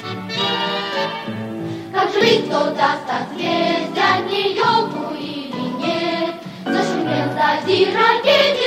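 Compressed frames were skipped at 2.21 s: a run of frames never reached the output, either missing from the file or rejected by the decoder as damaged. The audio jumps forward by about a tenth of a second.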